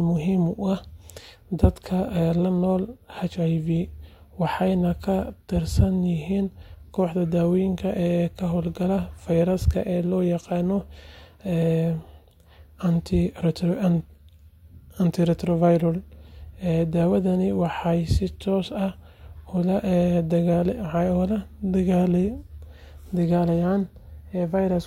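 No audible technical faults turn up anywhere in this recording.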